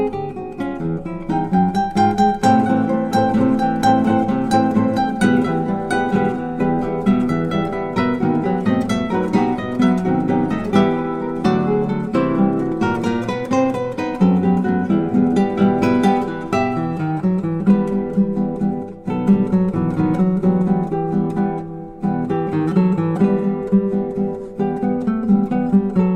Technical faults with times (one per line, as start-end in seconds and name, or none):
none